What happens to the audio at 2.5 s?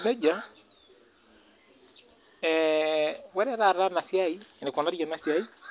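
Nothing goes wrong at 2.5 s; the speech carries straight through that moment with no dropout, click or distortion.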